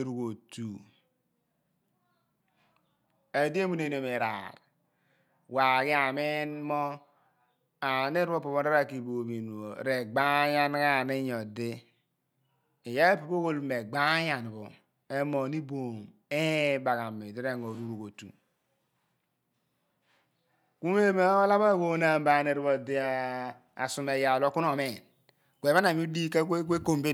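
From 24.86 s to the end at 27.14 s, pre-emphasis is left on. The treble boost, which fits the CD 50/15 µs curve, was never undone. Highs sit about 8 dB up at 10 kHz. The sound turns thin, bright and sibilant.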